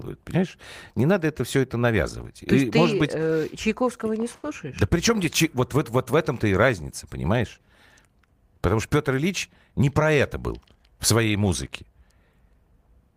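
A speech recording with two timing faults from the receiving end of a network link. At 4.35 s to 4.45 s, a short stall from a late packet: the jitter buffer ran dry, so the receiver held the last sound for 80 ms until the audio arrived, then resumed where it left off. Nothing is lost, but one sound drags on unnaturally, and playback sits 80 ms further behind from then on. From 9.72 s to 10.77 s, a jitter buffer speed-up: with surplus audio queued, the receiver trimmed small pitch-period slices repeatedly, cutting roughly 70 ms in total. The speech plays at 106% speed with unchanged pitch, so that stretch sounds slightly rushed.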